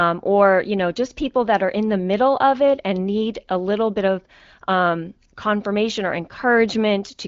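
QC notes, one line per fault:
No faults found in the speech. It comes through the AMR wideband (HD Voice) codec, with nothing above about 7.6 kHz and the clarity that fits a rate near 16 kbit/s.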